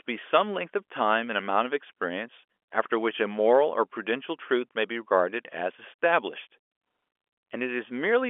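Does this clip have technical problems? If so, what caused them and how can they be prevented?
No, nothing stood out as a problem on listening to this speech.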